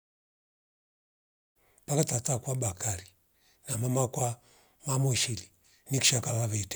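No technical faults are present.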